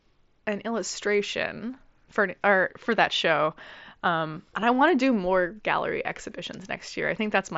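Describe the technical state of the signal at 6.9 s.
At 6.9 s the speech is intact, carried through the Bluetooth mSBC headset codec as usual, with its band limit just under 7.7 kHz and nothing above it.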